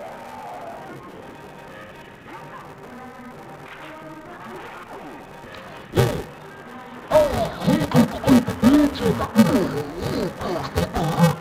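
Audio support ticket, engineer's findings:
Dull, robotic sound throughout, with a steady buzz near 345 Hz and no clear octave drop. Interleaved audio read as planar: each 2.9 ms block, consistent with 128-sample frames, split into false left/right halves at half speed. Probable component: deinterleave step in the capture/playback buffer path.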